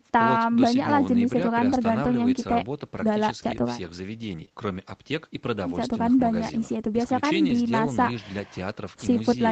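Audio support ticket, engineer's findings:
Rough, noisier patch at 4.37 to 4.43 s, about 40 ms, no gap. Lost packet rebuilt from error correction: fits two separate 20 ms packets lost, replaced by the low-bitrate in-band FEC copies carried in the following packets. Coarser coding on those frames, audible as grit.

Brief smear and wobble at 4.45 to 4.49 s. Short concealed packet loss: a 20 ms slot arrived too late, and the decoder extrapolated the preceding sound, pitch-based if voiced, shaped noise if not, for about 16 ms before blending back into real audio.

Second smear directly after, 4.49 to 4.52 s, same fault. Another 20 ms late, with about 12 ms filled by extending prior sound, then crossfaded. Back-to-back with the first concealment and right after the FEC patch, so about 130 ms of degraded audio.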